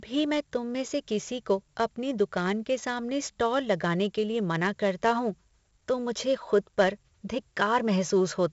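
Throughout the speech, 4-bit ADPCM compression leaves a gritty hiss riding on every loud syllable and roughening sharp onsets, where the adaptive step lags behind sudden jumps in level. Unlike steady background noise or plain low-bit quantisation, this grit rises and falls with the voice itself. The damage is heavy, and nothing reaches above 7.7 kHz, giving a dull top end that fits a 16 kHz sample rate at 64 kbps.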